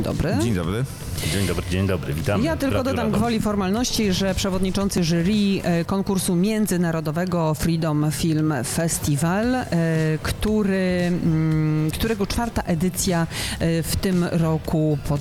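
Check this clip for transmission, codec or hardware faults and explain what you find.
One fault is present: a repeated buffer at 4.98 s. New data did not reach the output in time, so the playback device replayed its previous block once more. The repeated piece is only 2.9 ms long, which fits a 128-sample buffer, so instead of an audible stutter it comes through as a single sharp click from the hard joins on either side of the duplicate. Essentially no audio is lost; the repeat is inserted rather than replacing anything.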